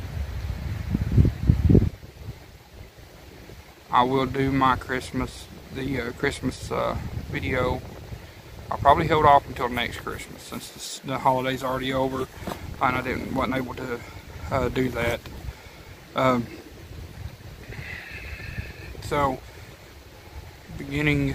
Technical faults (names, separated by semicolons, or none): none